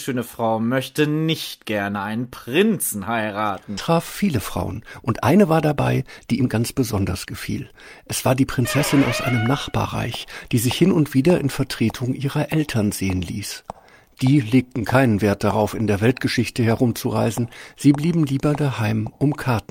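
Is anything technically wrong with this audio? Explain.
Yes, two timing faults. A skip ahead at 3.77 to 3.79 s drops about a second of sound with no filler, leaving an abrupt splice where the waveform and spectrogram jump discontinuously. From 4.84 to 10.55 s, a jitter buffer speed-up trims pitch-period slices to drain excess delay. The sound runs about 6% fast at unchanged pitch, with spectrogram harmonics steady but events compressed in time.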